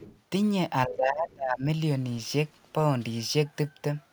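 From 0.0 to 0.2 s, faint other side's voice leaking through sits well beneath the speech, roughly 25 dB down. The likely cause is a loudspeaker echo the canceller left behind. On a spectrogram it shows as weak, separate harmonic traces.

Between 0.86 and 1.65 s, speech suppressed in double talk makes the voice dip by up to around 25 dB across most of that stretch, sounding ducked. Both sides speaking at once likely made the canceller turn everything down. The waveform shows a sagging envelope.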